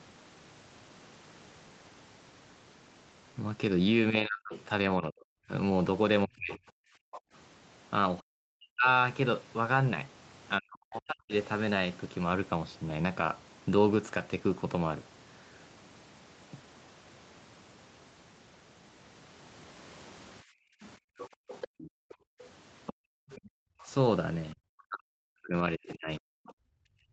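From 4.25 to 11.33 s the speech dips and breaks up, roughly 40 dB at its worst, for around two seconds in total. This is speech suppressed in double talk. The likely cause is an echo canceller that could not separate the talker from the loudspeaker echo while both sides spoke, so it turned everything down.

From 4.53 to 7.21 s a second voice is audible, about 15 dB below the speech. This is the other side's voice leaking through. It likely comes from loudspeaker playback that the canceller failed to remove from the microphone.

From 6.91 to 7.33 s the room sound drops out for roughly 300 ms, falling about 40 dB. This is background gated by the echo canceller. It clamped the microphone while the loudspeaker played, then released it.

From 20.45 to 23.84 s the background is gated again, about 40 dB down, for around two seconds in total.

From 21.18 to 23.88 s the other side's voice leaks through again, about 15 dB under the speech. 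The likely cause is the same incomplete echo removal.

From 23.86 s to the end, the speech is suppressed in double talk again, dropping roughly 40 dB at its deepest. The likely cause is the canceller again confusing the talker with echo. Across the whole clip, nothing is heard above 8 kHz.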